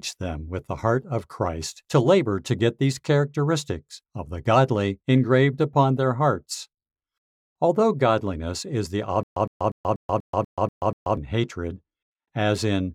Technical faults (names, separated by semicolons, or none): stutter with silent gaps